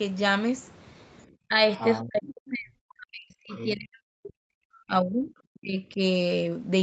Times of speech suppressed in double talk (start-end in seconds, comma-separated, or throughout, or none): 1.48-1.58, 2.03-5.99